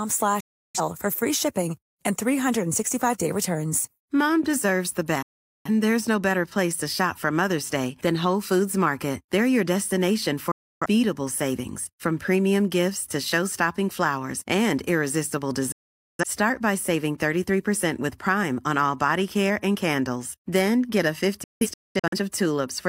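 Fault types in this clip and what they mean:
digital broadcast dropout: the receiver muted on lost or corrupt frames, so the speech cuts abruptly for up to half a second five times, the last in scattered holes.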